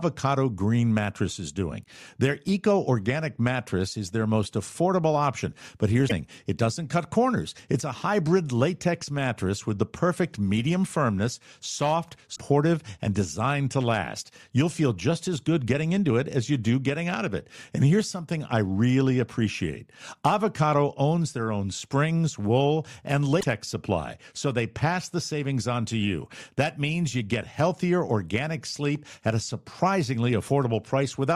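Damaged data in the compressed stream upsets the decoder three times, at 6.05, 12.32 and 23.37 s: it misreads corrupt frames, loses sync and hunts for the next header, producing a brief glitch lasting about 70 ms each time.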